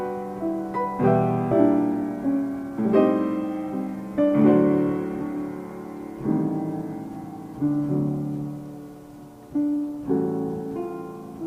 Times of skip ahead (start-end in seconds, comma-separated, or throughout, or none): 1.51-1.53